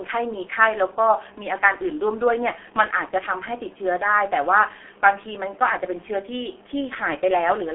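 From start to finish the speech has gone through the G.723.1 codec, and it's heavily damaged. Everything above about 3.7 kHz is gone, and the band sits roughly between 300 Hz and 3.4 kHz, so it sounds muffled and boxy. The coder rebuilds the voice from a coarse model refreshed only every 30 ms frame, which fits its 6.3 kbit/s mode. That gives the hoarse, buzzy texture and smeared consonants.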